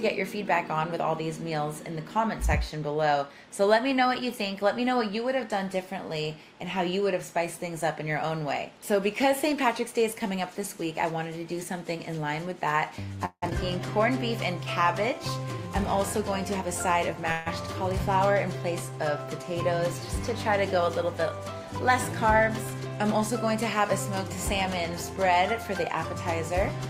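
At 13.25 s the sound stops moving forward and its last moment is stretched into a fading buzz or hiss, which ends in about 60 ms of silence before the audio resumes at 13.44 s. This call audio freeze, a 167 ms gap with nothing lost, is likely the result of delayed packets emptying the jitter buffer.

Right after, at 13.50 s, playback jumps ahead. This skip ahead drops roughly a tenth of a second of audio and joins the two sides almost directly, with only a 13 ms fill.

From 14.59 to 15.20 s the audio drags to 93% speed at unchanged pitch. In this jitter buffer slow-down, the receiver repeats pitch periods or bits of pauses to add 46 ms of reserve.

From 15.37 to 17.21 s the audio runs at 106% speed with the same pitch. This jitter buffer speed-up trims short pitch-period pieces, about a tenth of a second in total, to cut excess delay.

At 17.32 s a second call audio freeze holds the last sound as a fading buzz or hiss, with no silence. 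It lasts 141 ms, and the audio carries on at 17.48 s.

A final jitter buffer speed-up from 24.93 to 25.17 s runs at 112% and removes about 40 ms.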